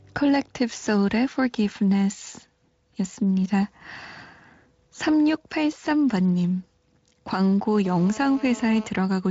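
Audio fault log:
7.85–8.87 s, GSM phone buzz: a hard, raspy buzz at 217 Hz with a dense stack of harmonics, sitting about 18 dB below the speech and unrelated to it. A nearby 2G handset transmitting in timed bursts 217 times a second couples RF into the audio path, where a nonlinear stage rectifies the pulses into an audible square-ish waveform. The level stays steady across the interval, consistent with a phone in an active call.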